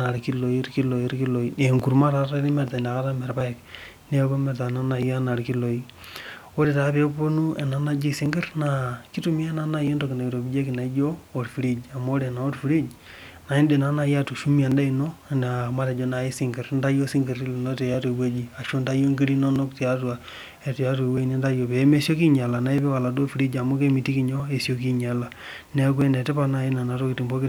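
A speech recording with a regular click or tick recurring every 1.61 s, from about 0.18 s to 26.0 s, around fifteen times in all, always at the same spacing regardless of what is being said. The metronome-like regularity points to clock drift buffer slips, likely from two devices whose sample clocks disagree by roughly 700 ppm. The buffer between them creeps until a few dozen samples are dropped or repeated, leaving a small discontinuity each cycle.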